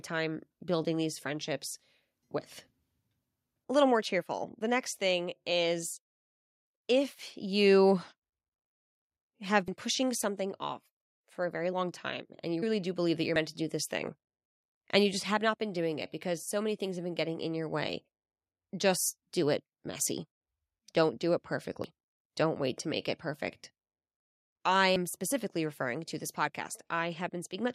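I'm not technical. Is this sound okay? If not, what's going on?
No. The recording software likely fell behind, so small pieces of speech were lost before it saved them: a dropped buffer (overrun). At 9.68, 13.36, 21.84 and 24.96 seconds you'll hear the speech jump ahead, skipping a few hundredths of a second.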